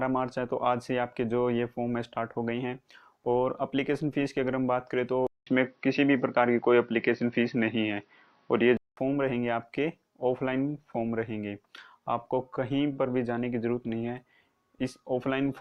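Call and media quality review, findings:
Input switched to a poorer device, 5.27–8.97 s: sound goes dull and boxy, nothing above 5.9 kHz, about 0.2 s dropout at the switch, a few dB level shift, faint new noise floor. Likely a mic or headset-profile swap, then back.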